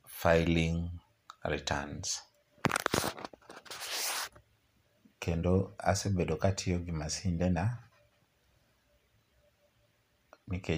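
Nothing technical goes wrong anywhere in this speech recording, so there's no fault to point to at any moment.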